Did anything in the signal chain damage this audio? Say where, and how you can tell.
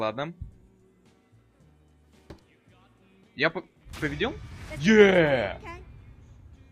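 No, there's no audible sign of damage at any stage of the signal chain; the signal arrives intact, with nothing added or lost along the way.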